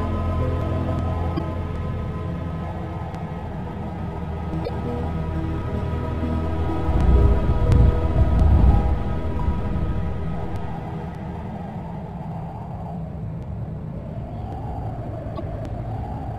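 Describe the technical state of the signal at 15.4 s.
At 15.4 s there is damaged data in the compressed stream, from 15.35 to 15.40 s. Corrupted bytes make the decoder misread frames and resynchronise, producing a brief chirp, squawk, click or short hole.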